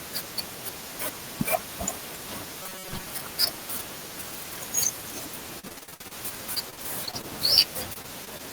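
Speech jumbles briefly at 1.2 to 1.32 s and 2.16 to 2.4 s: chunks out of order, where a 60 ms chunk played one, then three, chunks late.

From 2.63 to 3.06 s the voice becomes a rigid metallic buzz near 188 Hz, likely robotic sound from repeated short buffers of about 5 ms each, with roughly half the audio replaced by repeats.

Choppy, robotic speech with pieces missing follows at 5.59 to 6.13 s, 6.55 to 7.25 s and 7.93 to 8.41 s. This is repeated packet loss: 10, 6 and 4 gaps, patched by stretching the last sound, the longest 62 ms.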